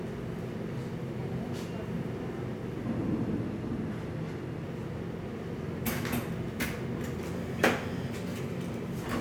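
A recording of sounds jumps about a semitone sharp and roughly 6% faster from 7.33 to 8.95 s, then snaps back, likely a drift correction step in clock-matching software.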